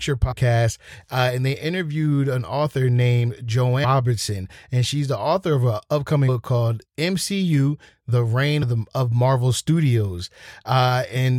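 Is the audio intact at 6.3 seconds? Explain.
No. At 6.27 s, right after "the author of an", the speech is hit by damaged data in a compressed stream. For about 16 ms the decoder meets corrupted bytes, misreads or discards the affected frame, loses sync and hunts for the next valid frame header. The result is a brief chirp or blip.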